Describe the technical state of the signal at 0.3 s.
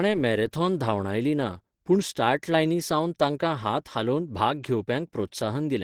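Opus compression is present at 0.3 s and runs through the whole clip. The speech sounds muffled and hoarse, with a rough, grainy texture where finer detail should be. This is likely a low-rate Opus encoder working in its hybrid mode. The figures point to a bitrate around 16 kbps: a speech-style coder handles the lower band while sparse energy coding fills the top. Content still reaches about 20.2 kHz, and the damage is plainly audible.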